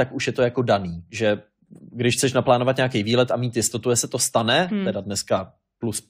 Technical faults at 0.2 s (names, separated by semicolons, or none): none